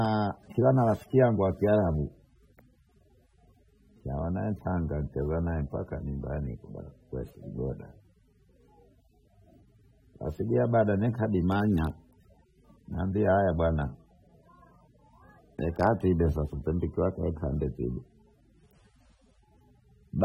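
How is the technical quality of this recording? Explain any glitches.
The technical quality is held back by audible codec damage across the whole recording. The likely cause is AAC compression: the encoder splits the audio into frequency lines and spends too few bits on them, which points to AAC-LC at a low bitrate, roughly 27 kbps. Nothing reaches above 16.5 kHz, so the top is dulled, and the starved bands leave a smeared, warbling texture, heard as fizz on sibilants and on held vowels in the speech.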